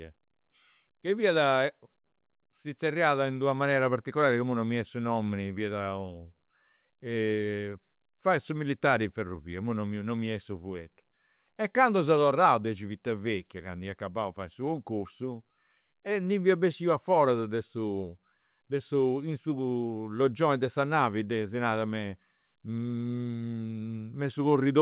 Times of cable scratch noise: none

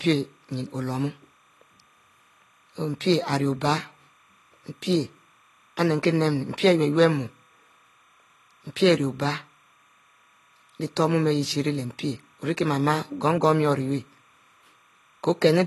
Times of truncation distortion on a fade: none

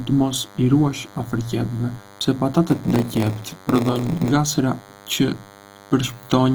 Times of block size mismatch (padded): 2.67-4.32

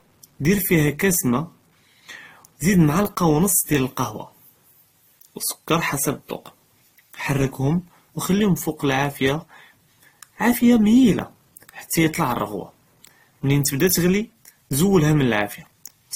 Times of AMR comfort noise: none

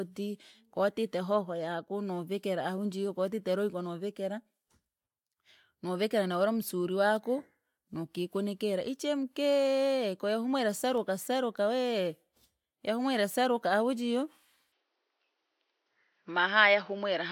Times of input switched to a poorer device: 14.72-17.31

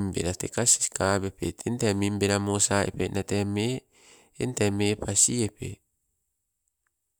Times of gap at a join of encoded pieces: none

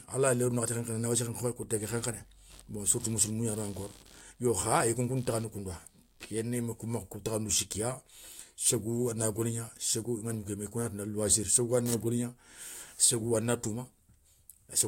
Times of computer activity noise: 1.82-6.24

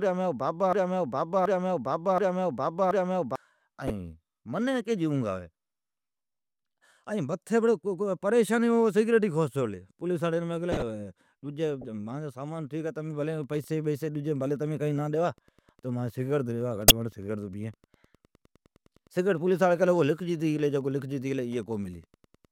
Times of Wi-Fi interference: 13.16-22.51

